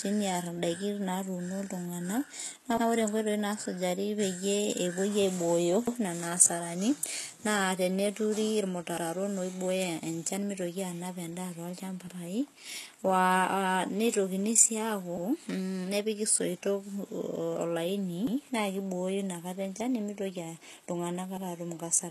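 All the way through, the speech has gritty, metallic treble that stops dead above about 12.3 kHz, likely HE-AAC compression at a very low bitrate, around 16 kbps. At 2.77, 5.87, 8.97, 12.07 and 18.27 s you get overlapping chunks: each join replays about 100 ms of audio, heard as a quick stutter at roughly 3 s spacing.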